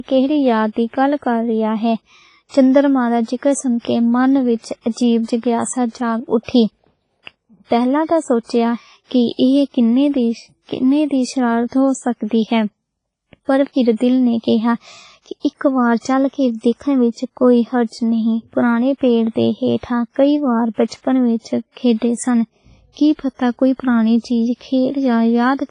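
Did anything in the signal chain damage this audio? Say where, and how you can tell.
Yes. The codec stage is the likely culprit: heavy WMA compression at a low bitrate, perhaps around 24 kbps, throughout the speech. Nothing survives above 10.4 kHz, and smeared quantisation noise leaves a ringing, washy sound and a hiss that swells and fades with the signal.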